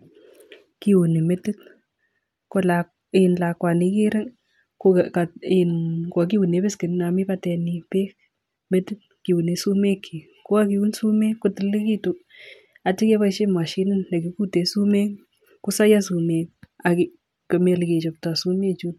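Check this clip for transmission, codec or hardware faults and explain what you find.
No faults detected here.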